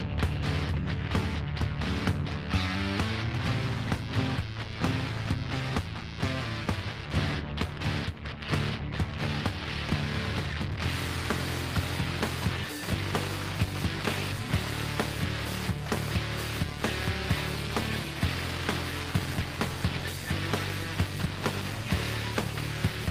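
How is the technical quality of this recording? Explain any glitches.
No faults are heard.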